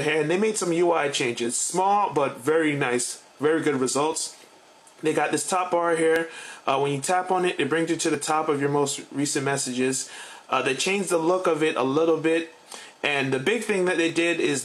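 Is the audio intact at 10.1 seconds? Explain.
No, not quite. Right around 10.13 to 10.16 seconds there's an overlap between stream segments. The timestamps of two neighbouring segments, which run about 2 seconds each, claim the same stretch of time, so the player trims away the overlap even though that sound wasn't actually duplicated. About 30 ms of real audio simply disappears, and the waveform jumps across the gap, which you hear as a short click or a tiny skip.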